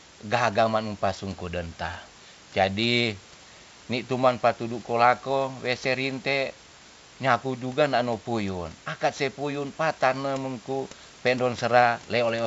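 The speech comes through G.722 wideband telephone coding with detail up to about 7 kHz and at most a faint upper-band hiss, which fits the 64 kbit/s mode, while room noise sits about 22 dB below the speech and nothing in the signal points to a technical problem.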